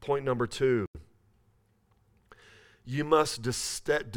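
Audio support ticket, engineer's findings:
Bluetooth stall, 0.86–0.97 s: speech cuts to silence for about 88 ms, then resumes. Likely wireless-link interference delaying packets; headphone buffer drained, playback paused until retransmitted packets arrived. Component: Bluetooth link/receiver buffer.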